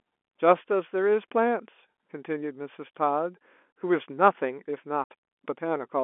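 A speech clip heard through a narrow G.711 telephone band. At 5.04 to 5.06 s there is packet loss filled with silence. The sound drops out abruptly with hard edges. The receiver played silence for 60 ms of lost audio. That fits three lost 20 ms packets.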